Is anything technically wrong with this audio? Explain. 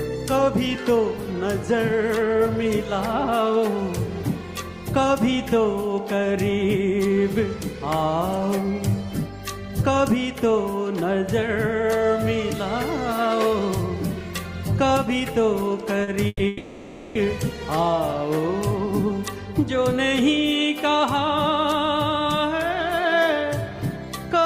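Yes. There are three network-related faults, all close together just after 16 s.

Short concealed packet loss, 16.03 to 16.10 s: about 40 ms of audio failed to reach the decoder in time, and the receiver bridged the hole by extending the preceding sound before crossfading back into the real signal. It is heard as a brief smear or wobble, and whatever fell inside that 40 ms is simply gone.

Burst of packet loss, 16.27 to 16.42 s: a run of packets went missing, and the decoder spent about 120 ms continuing the last sound while fading it down, reaching about 20 ms of silence before real audio returns. The result is a held buzz or hissy tail, followed by a jump forward where roughly 120 ms of material was never played.

Long network dropout, 16.47 to 17.18 s: the sound turns into a synthetic continuation, a buzz or hiss, that lasts about 680 ms and never drops to full silence before the real audio comes back further along. 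The cause is likely a stretch where no packets arrived at all. About 680 ms of material is missing, and the audio resumes at a later point rather than where it broke off.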